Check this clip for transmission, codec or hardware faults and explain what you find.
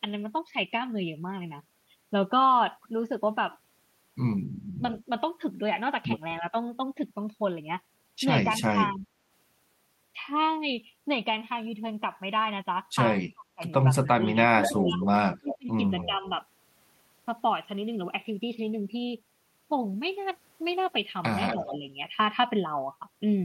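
The clip has two recurring faults, both typical of a hands-free call where the far end talks over the near talker.

Speech suppressed in double talk occurs at 4.78–5.08 s, 6.40–6.54 s, 8.45–9.11 s, 13.34–16.26 s and 21.56–21.86 s. The speech dips by about 5 to 15 dB in the short events and by up to about 30 dB in the long stretch around 13–16 s. The likely cause is an echo canceller that could not tell the local talker from loudspeaker echo and ducked everything. A waveform shows sudden envelope notches. A spectrogram shows broadband energy, mostly the upper bands, fading out and then returning.

Echo leak appears at 4.96–5.01 s, 14.63–16.06 s and 21.48–21.78 s. A delayed copy of the speech arrives about 243–261 ms late. It is faint, about 30 dB down, at 5 s, but strong at 14.6–16.1 s, only about 5 dB below the speech, and about 10 dB down near 21.5 s. This is likely residual loudspeaker pickup that got past the canceller and was sent back. 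On a spectrogram, the harmonic patterns repeat shifted a quarter-second later, often thinner and chopped.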